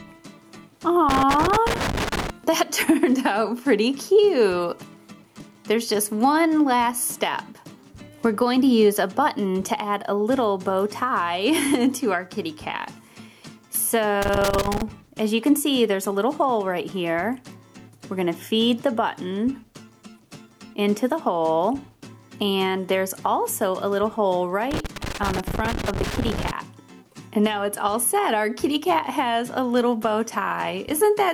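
Three bursts of loose connector crackle turn up, from 1.09 to 2.30 s, 14.22 to 14.82 s, and 24.71 to 26.51 s. A worn or dirty contact is making and breaking as something shifts, chopping the signal into that irregular scratchy crackle.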